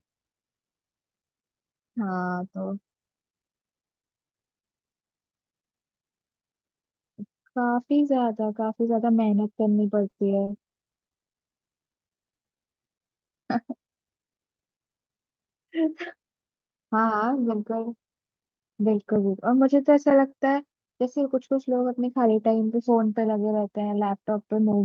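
Between 10.09 and 11.42 s the speech hits four short stalls from late packets: at 10.09 to 10.14 s, 10.44 to 10.49 s, 10.67 to 10.75 s and 11.31 to 11.42 s. Each time the jitter buffer ran dry, and the receiver stretched the last sound for 30, 30, 60 and 90 ms until the packet arrived. Nothing is skipped. What sets these apart from a slow-down is that each is a single held sound with a slight buzz or dip.

From 12.07 to 14.12 s comes a jitter buffer slow-down. Single pitch periods are repeated over and over, adding 227 ms and running the speech at 89% speed. Unlike the stalls, the stretching is spread across two seconds, so the pitch stays put while the delivery turns drawn out.

The opposite happens from 16.15 to 17.97 s, a jitter buffer speed-up. A surplus in the buffer is trimmed by cutting short pitch-period slices many times in a row, removing about a fifth of a second. The speech runs at 111% speed with unchanged pitch and sounds hurried rather than chopped.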